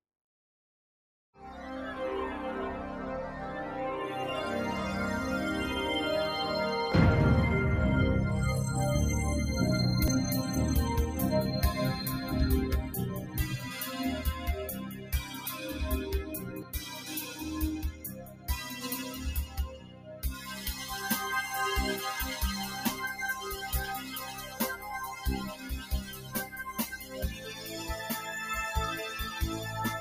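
A noise suppressor applied to music or sounds runs through the whole clip. A processor tuned for speech treats sustained tones, ambience and decay as noise, so held material and tails sink while attacks pass, and the level pumps and thins over a swing of about 15 dB.

At 6.92 s and 10.08 s, a sudden jump forward in the sound marks a dropped buffer (overrun), likely caused by samples being overwritten before they were read. Roughly 50 ms vanishes at the first and around 150 ms at the second, with the two edges spliced together and no silence.

Sound cut by the noise suppressor appears at 14.71–15.81 s, 16.23–17.49 s, 17.88–19.26 s, 19.46–20.96 s, 22.67–22.86 s, 23.98–24.89 s, 25.10–28.06 s and 29.56–29.74 s. Here the suppressor misjudges sustained or fading sound as noise and pulls it down by about 5 to 15 dB, cutting decays short.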